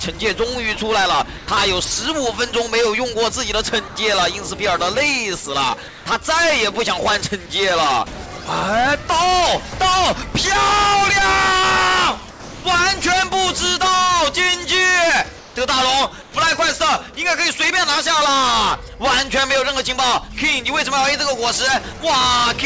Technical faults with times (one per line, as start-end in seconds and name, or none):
1.38-1.48 sound dropped by the voice detector
3.88-3.96 sound dropped by the voice detector
5.88-6.06 comfort noise in place of the background
10.32 sound dropped by the voice detector
12.30-12.64 sound dropped by the voice detector
15.38-15.56 comfort noise in place of the background
16.22-16.34 comfort noise in place of the background